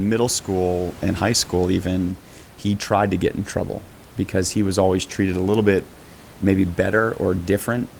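No technical faults can be heard in the speech, and the only other sound is the room's own background noise, sitting about 25 dB below the voice.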